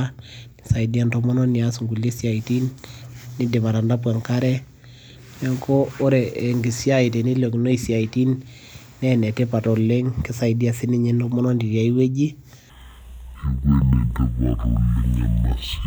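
From 12.70 s to the end at 15.87 s, stereo read as mono drags the speech to half speed, an octave lower, with spectrogram harmonics compressed and a faint mirrored image above.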